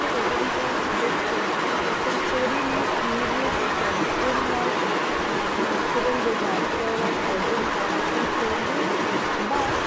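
A loudspeaker on one side of the call was likely not fully handled by its echo canceller, so an echo leak runs from 0 to 9.86 s. A second copy of the speech trails the original by about 147 ms, at roughly the same loudness.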